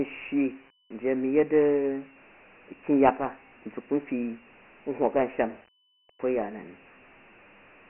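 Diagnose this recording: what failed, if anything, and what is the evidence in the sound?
The failure is at the codec stage: Dialogic VOX ADPCM, heard throughout the speech. Nothing is left above 3 kHz, which fits a 6,000-sample-per-second rate and about 24 kbps. Below that, the phone-line band starts near 250 Hz. The damage is heavy. A gritty hiss rides on every syllable and rises and falls with the speech. The cause is 4-bit adaptive coding. Each sample stores only a coarse step, so quantisation noise tracks the signal level.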